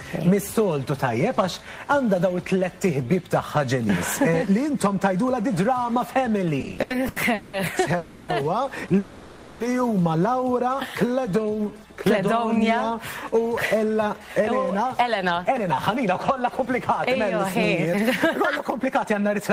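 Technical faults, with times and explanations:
6.59–7.55 s, repeated stalls (stutter): ten short gaps filled with continued sound, about 420 ms in all, longest 190 ms. Packets arrived late, so playback drags unevenly.
7.97–8.30 s and 8.98–9.62 s, call audio freeze: the sound hangs as a fading continuation for 310 ms, then 620 ms. Packets were likely held up in transit. Nothing is lost.
11.07–12.64 s, jitter buffer slow-down: repeated pitch periods add 169 ms. Playback runs at 90% speed with unchanged pitch, so sounds are drawn out.
14.13–19.50 s, jitter buffer speed-up: short pitch-period pieces are cut, removing about 0.3 s. Playback runs at 106% speed at the same pitch and sounds hurried.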